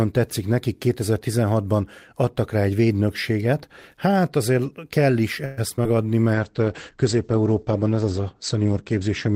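Around 5.45 s to 5.86 s the speech breaks up with repeated packet loss, the robotic kind. There are four short holes in that stretch, the longest about 118 ms. Each one gets papered over by stretching the previous bit of sound, and about a third of the span ends up concealed that way. That's why it comes out choppy, with small pieces simply gone.

Then from about 6.35 s right to the end there's a call bitrate drop. The encoder gets starved, and what you hear fits a fall from roughly 32 kbps down to around 11 kbps, holding at the low end for about 2.5 s. The top end gets chopped too, from about 20 kHz down to 8 kHz, so the speech turns muffled and rough and watery, with the air gone.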